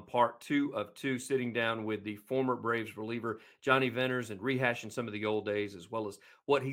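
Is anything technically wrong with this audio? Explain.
No, nothing technically wrong can be heard in this speech recording.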